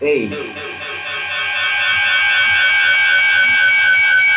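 From 0.31 s to the end, a feedback howl builds as the loop gains level on each trip. It settles near 2 kHz, repeating around the loop about every 200 ms and peaking about 3 dB above speech. A spectrogram shows a bright horizontal line below the 4 kHz ceiling left by the narrowband call codec.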